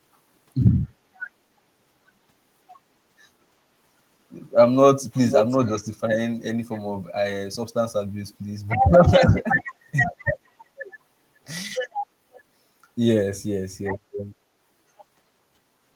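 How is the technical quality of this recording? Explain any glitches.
The recording has two brief echo faults. An echo leak likely arises because the far side's echo canceller on a loudspeaker let its microphone pickup through and sent it back. From 5.14 to 5.58 s, a copy delayed by 483 ms returns about as loud as the speech. From 12.33 to 12.42 s, a very faint scrap follows 528 ms behind.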